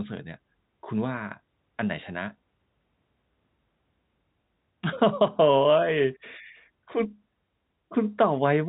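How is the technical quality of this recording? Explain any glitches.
No glitches can be heard anywhere in this recording.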